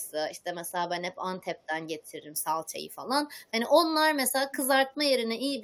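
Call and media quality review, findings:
Echo leak, 0.02–0.11 s and 4.51–4.56 s: faint delayed copy of the speech, 340 ms behind, very low at first, clearer at 4.5 s. Likely residual from a far-end loudspeaker path that the echo canceller did not fully suppress.

Pre-emphasis left on, 2.36 s to end: thin, bright, sibilant speech with treble about 11 dB hotter at 10 kHz than at 1 kHz, matching a 50 µs FM boost whose complementary de-emphasis was never applied downstream.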